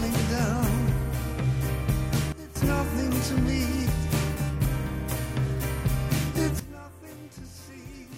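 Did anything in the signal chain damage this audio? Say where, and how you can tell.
Yes. There are two sudden gain jumps. At 2.32 s the level falls by about 14 dB, then returns at 2.55 s. At 6.60 s it drops by about 17 dB and stays down to the end. The sound and the background noise fall together, in a single sample, with no fade. That points to a digital gain stage, not the source. The likely cause is a gain setting or bit shift applied in the driver or processing chain without a ramp.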